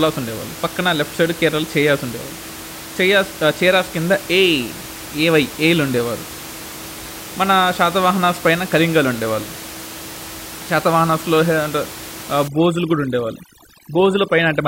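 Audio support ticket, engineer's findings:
Overdone noise removal, 12.48 s to end: background drops and breaks up into twinkly specks. Denoiser set too hard, gating bands near its noise estimate, quiet speech detail included. Room noise audible earlier, about 15 dB under speech.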